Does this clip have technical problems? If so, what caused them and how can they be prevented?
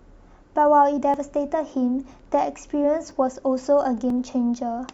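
Yes. Overlap between stream segments causes tiny skips at 1.14, 2.13, 3.11 and 4.10 s. Overlapping one-second segment timestamps made the player discard roughly 10 to 17 ms of genuine speech, so the waveform jumps. Prevention: have the packager write contiguous, non-overlapping segment timestamps so the player never trims real audio.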